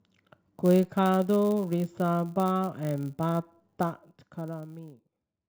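A filter restarted on every block runs through the whole speech clip. The filter loses its stored state at each block boundary and starts again from silence. Each restart leaves a small transient. These arrive 100 times a second, which points to blocks of 10 ms. The result is a steady 100 Hz buzz under the speech. It grows louder and softer with the signal, so it tracks the level of the speech.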